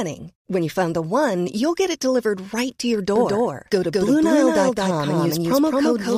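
From 3.16 s, after "delivered right to your", a doubled audio track begins and runs to the end. A second copy of the speech, about as loud, trails by roughly a fifth of a second. It starts abruptly and has no room colour. A slower second capture path is the likely cause.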